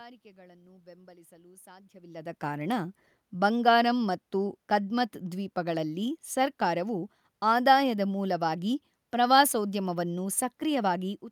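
Nothing in the system has gone wrong here; the background noise belongs to the room itself, and the level changes around 2 s and again near the end are simply the talker shifting position relative to the microphone.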